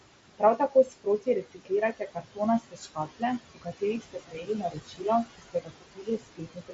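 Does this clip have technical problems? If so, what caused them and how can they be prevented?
Yes. Noise suppressor artifacts run through the whole clip. The suppressor lowers the steady background by about 20 dB frame by frame. To prevent this, use a gentler suppression setting.

Speech cut by the noise suppressor occurs at 0.38–1.72, 1.92–2.40, 2.60–3.23, 3.55–3.83, 4.00–5.05 and 5.25 s to the end. Soft parts drop about 20 dB and sound swallowed. To prevent this, reduce the suppression depth or improve mic placement so speech stands clearer of the room noise.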